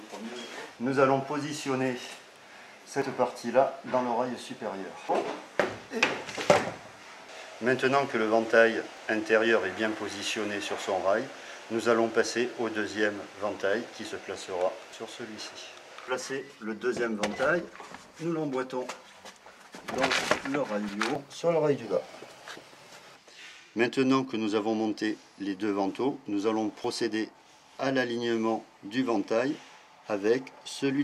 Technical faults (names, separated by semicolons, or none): audio missing between chunks